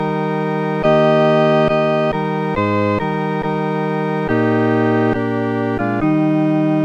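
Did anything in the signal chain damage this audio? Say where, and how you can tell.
No, nothing here shows damage.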